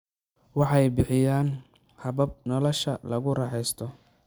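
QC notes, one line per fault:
No faults detected.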